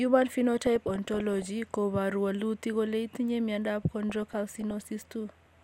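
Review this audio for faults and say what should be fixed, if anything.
Bubbling, squelchy chirps run over the speech from 0.59 to 1.47 s, ending just before "koporu wolutik kole itinye", and again, more lightly, from 4.10 to 4.81 s. This is DAB burbling. Weak reception let bit errors, roughly half a percent in the first burst and somewhat fewer in the second, slip past error correction into the MP2 audio data. Corrupted samples then put short blips of noise in single sub-bands, and corrupted scale factors make sub-bands jump in level for up to a frame. Improving reception with a better-placed antenna or a stronger multiplex signal would prevent it.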